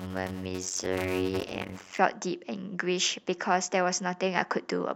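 From 0.00 to 1.98 s the speech carries a steady buzz at about 92 Hz and drags to roughly 0.53 times normal speed. This is a block size mismatch (padded): each block holds only 256 written samples, which fits a read block near 480 samples, and the shortfall is filled with silence.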